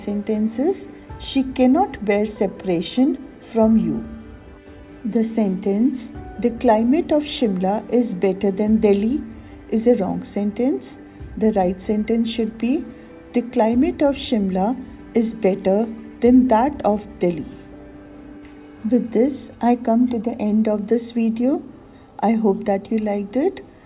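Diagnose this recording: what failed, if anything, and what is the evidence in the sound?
Nothing failed at any stage in the chain: no dropouts, clicks, clipping, timing breaks or level faults are audible anywhere in the sound.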